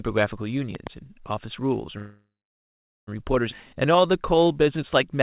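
Between 0.75 and 0.89 s a loud pop sounds twice in quick succession, roughly 10 dB above the speech, which carries on underneath. Two sharp clicks riding over uninterrupted sound are likely a voltage step, such as a plug or switch transient, rather than a dropout in the stream.

From 1.98 to 3.09 s comes a call audio freeze. The last sound is stretched into a fading buzz, then about 0.8 s of silence follows. The likely cause is packets held up until the jitter buffer ran dry. Unlike a skip, nothing is lost: the speech resumes exactly where it stopped, so roughly 1.1 s of delay has simply been inserted.

At 3.51 to 3.54 s the opposite happens, a skip ahead. A stretch of audio was dropped while later audio was already waiting, so playback jumps forward. Roughly 0.7 s of speech vanishes and the two sides are butted together with almost no gap. The gap is absent rather than audible, which separates it from the freeze.

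From 3.61 to 5.18 s a jitter buffer slow-down follows. The buffer rebuilds its reserve by repeating single pitch periods, so speech runs at about 90% speed and gains 172 ms. Pitch stays put, with drawn-out sounds, which is what distinguishes it from a tape-style slow-down.

Throughout, nothing above 4 kHz is heard, which fits a narrowband telephone codec such as G.711.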